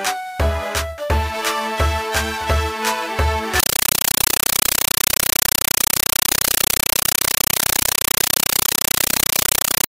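From 3.60 s to the end at 9.88 s, the sound gives way to very loud, chattering static, 8 ms bursts of noise repeating 31.25 times a second. This is a compressed stream played as audio: AC-3 data, which fits a 384 kbps stream, reproduced as raw samples instead of being decoded.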